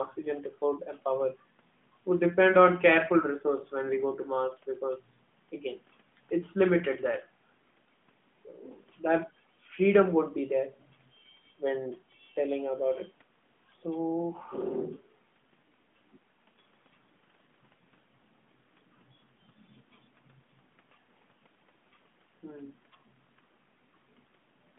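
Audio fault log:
No faults are heard in this speech clip. The sound comes through an AMR narrowband mobile codec path, confined to a telephone band of about 150 Hz to 3.5 kHz with only light coding texture, which fits its 12.2 kbps mode.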